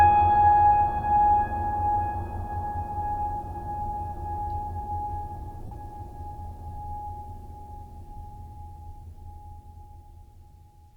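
At 5.66 s the music drops into a brief gap of lost LE Audio frames lasting about 53 ms, to 5.72 s, which fits seven 7.5 ms frames. The LC3 decoder conceals the loss by repeating the last spectrum with randomised signs, so tonal content smears into noise and fades before playback resumes.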